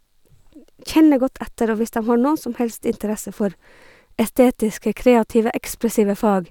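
Nothing goes wrong anywhere in this speech recording, so there's no fault to describe at any point along the way.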